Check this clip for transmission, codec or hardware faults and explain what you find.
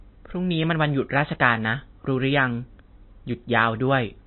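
One codec fault is present. Throughout the speech there is MP3 compression, likely from a very low bitrate near 26 kbps. Nothing sounds above 4 kHz, so the top is dull. The damage is plainly audible.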